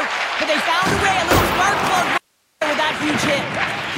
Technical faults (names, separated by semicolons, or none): audio dropout to a faint residue